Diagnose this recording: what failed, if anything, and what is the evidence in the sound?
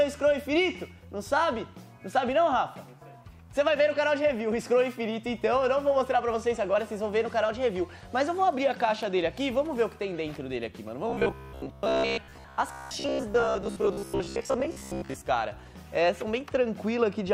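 Robotic sound from repeated short buffers, 11.10 to 15.22 s: a fixed 66.8 Hz buzz, likely a buffer stage looping roughly 15 ms chunks while most new audio is skipped.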